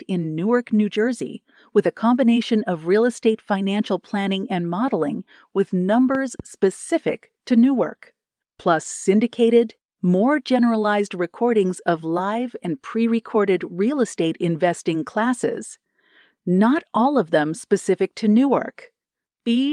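At 6.15 s the speech is hit by a loud pop, two sharp pulses in quick succession ending by 6.42 s and peaking at roughly 5 dB above the speech, which continues underneath. This is likely a voltage step from a plug, switch or static discharge, shaped by the following circuitry.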